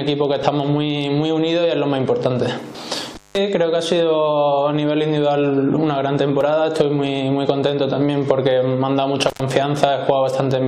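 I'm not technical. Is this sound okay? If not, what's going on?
No. Overlap between stream segments shows up at 0.43 s and again at 6.41 s. The audio arrives in 6-second chunks whose timing overlaps slightly, so the player trims a sliver of sound that wasn't really repeated. You hear a tiny click or skip.

Intermittent contact occurs from 3.15 to 3.38 s and from 9.28 to 9.42 s. A loose cable or plug briefly loses connection, so the sound drops out for about 180 ms and then about 100 ms, with crackle where it cuts and returns.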